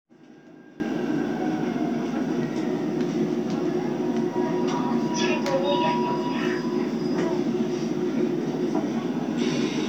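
From the start to 0.8 s, the sound drops by about 21 dB and turns faint. The likely cause is one channel inverted. Reversed polarity on one side cancels the shared content when the two channels sum to mono.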